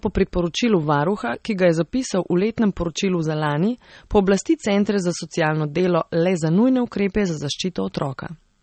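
It's a speech clip, and the whole thing has nothing above about 8.4 kHz, with that dull low-bitrate character all the way through. That points to low-bitrate audio saved at a high bitrate, likely a roughly 32 kbit/s MP3 later re-saved at around 256 kbit/s, which can't bring back what was lost.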